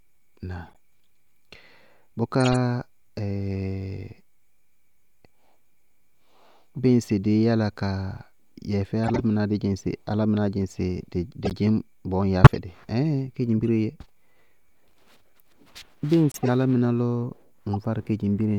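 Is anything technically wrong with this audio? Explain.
Yes. The speech is broken by eight short chirps and noise bursts, each from a corrupt frame that was decoded anyway. They occur at 0.64–0.77 s, 2.41–2.56 s, 9.04–9.20 s, 11.43–11.53 s, 12.44–12.58 s, 13.58–13.63 s, 16.32–16.49 s and 17.73–17.75 s.

The bursts range from a faint blip near 0.64 s to a much louder burst near 12.44 s. Most last a tenth of a second or more, and the last one is a tiny tick.

Flipped bits in the compressed data made the decoder misread gains and spectral codes. It then placed energy at wrong frequencies for the span of the damaged frames, a handful of frames per burst.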